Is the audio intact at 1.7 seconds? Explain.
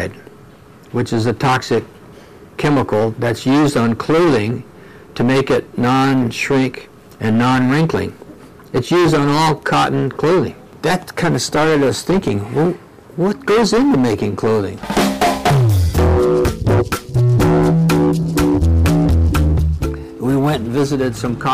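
No. Hard clipping runs through the whole clip, including 1.7 s. The signal drives about 21 dB past what the stage can pass. Roughly a fifth of the samples are cut flat. Those flat tops add high harmonics, heard as a harsh fuzz on every loud sound.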